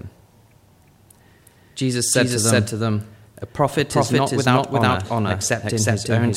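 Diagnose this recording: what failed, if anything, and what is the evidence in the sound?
A doubled audio track runs throughout: every sound returns, full-band and dry, about 0.4 s later at roughly the same level, with no decay or room colour. This is likely a second capture path, or an edit layering two misaligned copies, mixed with the original.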